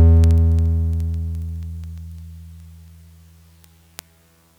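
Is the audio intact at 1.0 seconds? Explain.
No. At 1.0 s you're inside a run of word clock ticks lasting from 0.1 to 4.55 s. The receiver's clock drifts a few hundred ppm from the sender's, so a single sample gets dropped or repeated roughly every 70 ms. That puts sharp, unevenly loud ticks over the music.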